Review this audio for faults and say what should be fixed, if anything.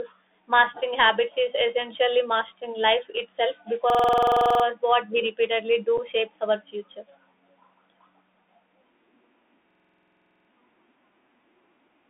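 Throughout the clip the speech sounds boxed-in and scratchy, with a grainy hiss underneath and harsh sibilants. This is the Bluetooth CVSD headset codec: it sends one up-or-down bit per sample at 64 kHz, and its step size adapts too slowly for loud high sounds. The line passes only about 250 Hz to 3.6 kHz. Recording over a wideband headset profile or a wired microphone prevents this.

From 3.90 to 4.64 s, just after "essentially mastering life itself", a rapid mechanical stutter at about 21.5 Hz replaces the speech. This is a system hang loop. The host or driver froze while the audio hardware replayed the same 46.44 ms slice 16 times, which fits a 2048-sample ring buffer. Speech resumes at "what we repeatedly" without an apparent gap. Fixing the driver or the process stall that blocks buffer refills prevents it.

From 9.71 to 10.50 s the same machine-gun stutter returns. It is a second system hang loop, with the 46.44 ms buffer slice repeating 17 times at about 21.5 Hz. 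The audio then continues with nothing evidently missing. Removing the source of the system stalls, as for the first loop, prevents this one as well.

At 5.98 s, between "what we repeatedly" and "shapes our future", there is a brief abrupt dropout. This is unconcealed Bluetooth headset packet loss. About 7.5 ms of audio went missing, which fits a couple of lost packets, and the link filled the hole with silence or an idle pattern instead of masking it. Improving radio conditions or enabling packet loss concealment prevents it.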